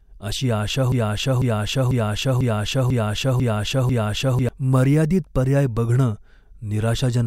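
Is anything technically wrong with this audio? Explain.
Yes. From 0.92 to 4.49 s, a broken-record loop replays one identical 0.5 s fragment seven times, likely from a stalled stream resending its last chunk, unlike a decaying echo.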